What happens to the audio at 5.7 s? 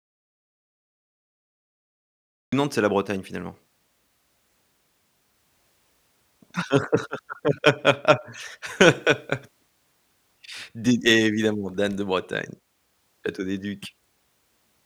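Nothing goes wrong at 5.7 s; the speech there plays through cleanly, with no dropout, click, distortion or level jump.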